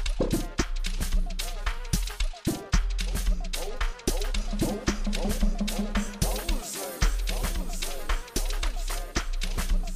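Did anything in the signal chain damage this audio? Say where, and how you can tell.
No: nothing in the chain, from capture through conversion and transport to playback, has left a detectable mark on this audio.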